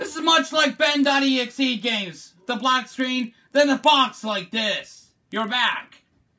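Throughout the clip, a resampler restarted on every block produces a steady 25 Hz buzz of ticks riding on the sound. Each 40 ms block was converted in isolation, likely from 44.1 kHz down to 16 kHz, so every block edge carries a small discontinuity.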